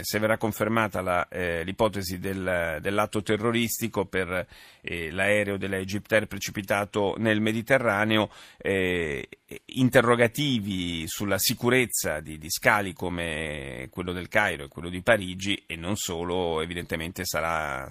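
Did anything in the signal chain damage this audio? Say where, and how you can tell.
No, nothing along the way seems to have harmed this speech recording, and there's nothing in it that points to any stage of the chain having done damage.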